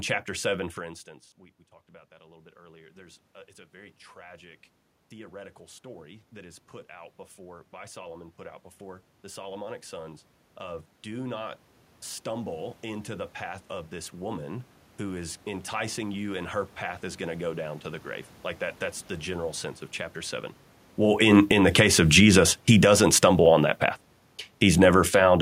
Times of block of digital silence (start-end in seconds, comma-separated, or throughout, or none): none